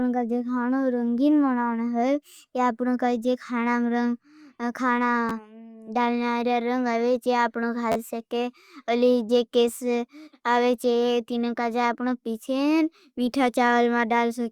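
It's a speech clip with two repeated buffers, where playback ran dry and the device replayed its last chunk. At 5.29 s, right after "जो खाना", one extra play gives a quick click-like stutter. From 7.92 to 7.95 s, just before "सके अलिए जो", the chunk loops three extra times into a brief buzz. The repeat length of roughly 11.6 ms fits a 512-sample buffer. About 10 ms and then about 40 ms of real audio get skipped.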